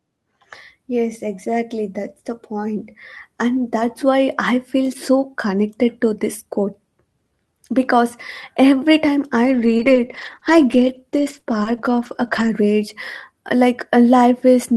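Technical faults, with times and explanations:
9.45–12.49 s, scattered short gaps: about seven brief dropouts, none longer than roughly 20 ms, remove about 140 ms of the speech in total, roughly 5% of this stretch. Each hole is patched by extending the last received sound, and the repaired signal runs for about 1.22 s as it blends back into real audio. The speech stays clear, with small ticks, smears and hiccups where each gap is filled.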